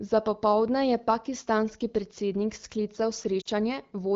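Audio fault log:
3.41 to 3.48 s, lost AMR speech frames: about 40 ms of the coded speech failed its checksum and was dropped, which fits two lost 20 ms frames. The AMR-WB decoder, running at 12.65 kbit/s, filled the gap by repeating the last good pitch and vocal tract settings at falling gain, so the speech briefly drops to near silence within the two frames. Then it comes back weak or rough for a moment.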